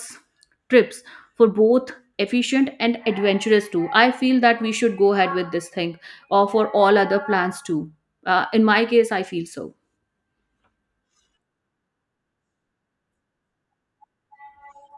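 No technical faults are audible.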